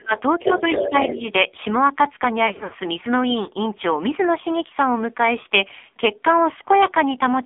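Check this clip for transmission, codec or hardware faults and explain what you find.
Four kinds of fault are audible: heavy narrowband codec damage throughout, two dips from double-talk suppression, a leaking second voice, and a burst of lost frames.

AMR narrowband mobile codec (whole clip): the sound is confined to roughly 250 Hz to 3.6 kHz, with nothing above. The voice is buzzy and synthetic, as a pulse-driven vocal tract model produces when starved of bits. This fits a low rate around 5.9 kbps.

Speech suppressed in double talk (0.00 to 0.12 s, and 0.77 to 1.20 s): the first dip is deep, near 30 dB for about a tenth of a second. The second is shallow, around 5 dB, spread over roughly 0.3 s. This is likely the echo canceller turning down everything while both sides talk at once.

Other side's voice leaking through (0.40 to 1.32 s): a second voice sits only about 5 dB below the talker. 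This is likely loudspeaker echo that the canceller failed to remove from the microphone, overlapping the second suppression dip.

Lost AMR speech frames (2.48 to 2.76 s): 160 ms of audio drops out across a 240 ms span, with the longest gap 80 ms. The sound smears and fades where the decoder repeats its last good settings at falling gain, then returns rough. This fits about eight lost 20 ms frames.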